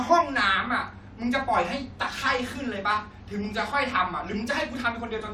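Listening through the speech recording, nothing stood out as a technical fault at any point.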